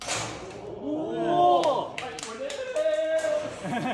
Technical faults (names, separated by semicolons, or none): none